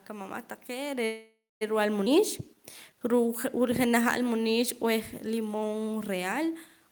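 A speech recording with three network-related faults. At 1.05 s the sound stalls. The last fragment is stretched into a buzzy, fading tail that drops to silence for its final 190 ms, and normal speech resumes at 1.63 s. This is a call audio freeze, likely caused by packets held up in transit until the jitter buffer ran dry. The receiver filled about 556 ms by extending what it last had. Nothing is lost, but everything after it arrives over half a second later. Between 2.05 and 2.08 s the audio lurches forward. A 10 ms join stitches two moments together, and roughly 150 ms of speech simply vanishes. This is a skip ahead: with later packets already queued, a stretch was dropped, either in transit or by the buffer, trimming roughly that much of the lag. From 2.15 to 4.25 s the delivery drags, running at 94% speed with no pitch change. Sounds are drawn out. This is a jitter buffer slow-down. 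The receiver repeated individual pitch periods and bits of pauses, adding 142 ms to rebuild its reserve. A room noise sits underneath throughout, and the level shifts around 1 s and 6 s come from the talker moving relative to the microphone.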